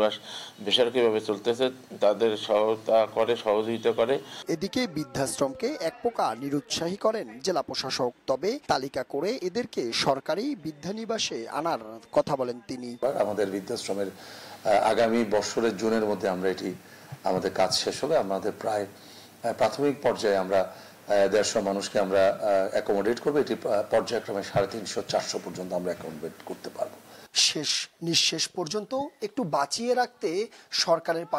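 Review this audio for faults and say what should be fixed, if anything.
Nothing stood out on listening, so there is nothing here that needs fixing.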